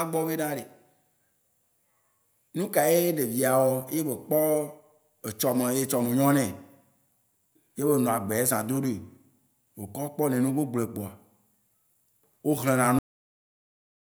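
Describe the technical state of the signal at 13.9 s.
Nothing's there. 13.9 s falls inside a cut-off end. The speech stops dead at 12.99 s, mid-sound, and drops straight to digital silence with no decay through to 14.03 s. That's the signature of the final buffers never getting written or played out.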